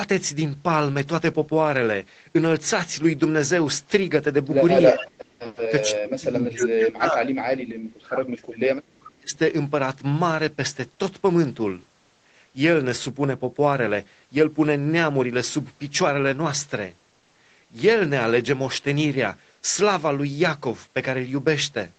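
Speech suppressed in double talk hits this speech clip three times: briefly from 4.92 to 5.05 s with a dip of about 15 dB, then from 5.69 to 8.24 s, where roughly two seconds of the talker are pushed down by up to about 35 dB, and again from 8.96 to 9.37 s, also by about 35 dB. The voice sinks and breaks apart while the far side is talking, likely because the echo canceller could not separate the near talker from the loudspeaker echo and attenuated both. Echo leak overlaps the first dip, from 4.99 to 5.56 s: a copy of the voice trailing by 397 ms, about 15 dB below the speech. A much fainter scrap, about 40 dB down, returns from 8.84 to 8.94 s. This is most probably residual far-end audio that the canceller failed to remove from a speakerphone microphone and that was sent back into the call. Throughout, the audio tops out around 8 kHz, which fits a wideband Opus call path.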